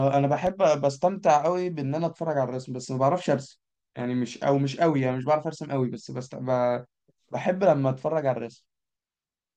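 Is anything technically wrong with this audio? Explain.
Yes, there's one loud pop near the start of this speech clip, from about 0.47 to 0.50 s. A single sharp transient jumps out a few dB above the speech while the talking carries on underneath it. It's likely a sudden voltage step or spike, from something like a plug, a switch or static, that got added to the signal and was then rounded off by the circuitry that followed, leaving one quick thump.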